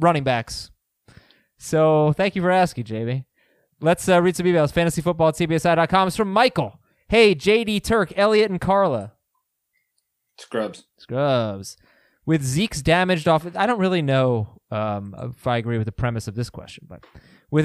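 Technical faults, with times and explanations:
No technical faults can be heard in this speech clip.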